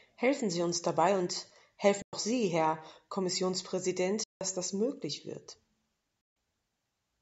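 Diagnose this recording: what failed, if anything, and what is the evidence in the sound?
The speech cuts to silence three times, from 2.02 to 2.13 s, 4.24 to 4.41 s and 6.21 to 6.36 s, roughly 107, 171 and 149 ms long. The stage is the wireless link to playback, and the cause is likely a Bluetooth dropout: packets arrived too late and were discarded. Unlike a buffer underrun, which delays the sound, the speech resumes as if it had played on through each gap, and nothing fills the holes.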